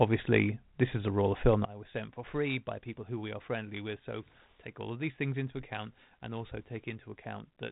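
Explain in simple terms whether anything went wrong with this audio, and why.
Right after "a roll of film", at about 1.65 s, there's a sudden gain jump. The sound drops a lot quieter in a single step, background noise and all, and stays down to the end. Likely a volume change applied instantly instead of faded in.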